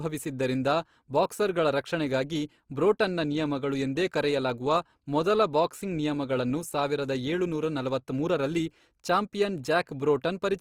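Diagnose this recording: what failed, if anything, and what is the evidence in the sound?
The codec stage is at fault. Throughout the clip the speech sounds grainy and rough, with its tonal parts turned noisy rather than swirly. This points to Opus compression, likely in its CELT music mode, at a low rate that fits about 24 kbps. With too few bits, each band keeps its energy but is filled with folded or noise content. On a spectrogram, bands stay filled to about 20.3 kHz, with harmonics dissolving into speckled noise instead of leaving holes.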